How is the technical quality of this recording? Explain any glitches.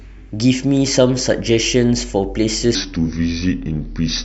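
The recording has one clear glitch. It affects the final stretch of speech.

From 2.75 s to the end, there is a section at the wrong speed. Playback drops to 0.80 times normal. Pitch falls with it, roughly four semitones. The speech turns deep and slow. This was likely playback or editing against a mismatched clock.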